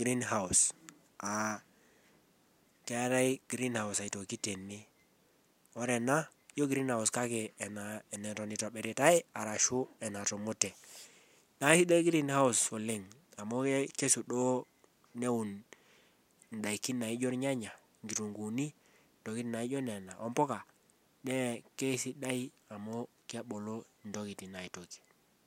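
No technical faults occur at any point in the recording.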